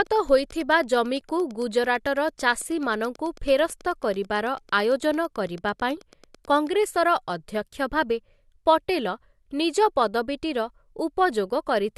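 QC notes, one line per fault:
0.07 to 6.68 s, train of clicks: a steady ticking runs under the speech at about 9 per second, so you get something like 70 near-identical pops, roughly as loud as the speech itself and just as clear in the pauses. The evenly spaced, same-shaped pulses point to something outside the sound injecting them, likely interference from nearby equipment or a faulty connection or power supply. It stops cleanly after 6.68 s.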